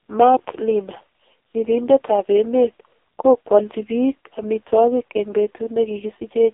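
From start to finish, the speech runs through an AMR narrowband mobile codec. The band is squeezed to roughly 300 Hz to 3.7 kHz, and nothing above 3.7 kHz survives. The codec rebuilds the voice from a vocal-tract model fed by sparse pulses. At very few bits, that model breaks down. The damage is heavy, which fits the lowest AMR-NB mode, 4.75 kbps. The voice sounds thin, buzzy and synthetic, like a poor phone call.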